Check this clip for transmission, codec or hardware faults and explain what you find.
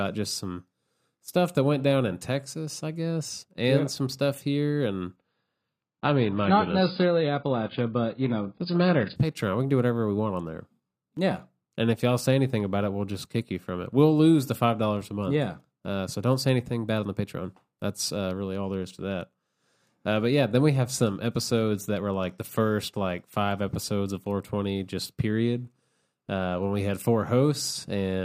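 There's one fault: from 5.16 to 9.16 s the speech drops to an adaptive stream at a lower bitrate. The player switched down mid-stream, so treble vanishes above 5.1 kHz and artefacts thicken, which fits a very low AAC rate. It snaps back with no gap.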